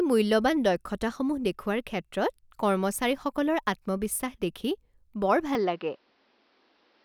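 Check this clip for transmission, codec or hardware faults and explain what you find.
One fault is audible. From 5.55 s to the end, the speech abruptly turns dull and boxy with nothing above 6 kHz and no gap: the input likely switched to a poorer, narrower-band device.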